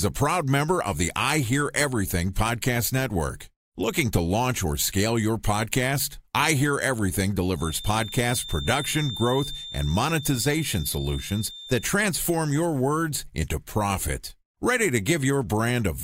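From 7.54 s to 11.94 s, a feedback whistle sits behind the speech. It is a thin, steady tone at 3.6 kHz, roughly 15 dB below the voice. Its level swells and fades slowly but never builds up. The likely cause is a loudspeaker feeding back into the microphone, with the loop held just at the edge of feedback. That keeps one frequency ringing without running away. The whistle stops just before "your words into profit".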